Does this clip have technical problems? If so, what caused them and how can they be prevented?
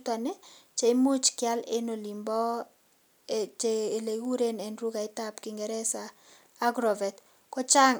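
No, there are no technical faults to report in this speech recording, so there is no cause to trace and nothing to prevent.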